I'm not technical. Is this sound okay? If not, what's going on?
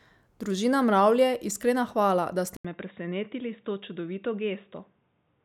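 No. Input switched to a poorer device at 2.57 s: after a brief gap, speech turns duller and quieter, likely from changing to a weaker microphone.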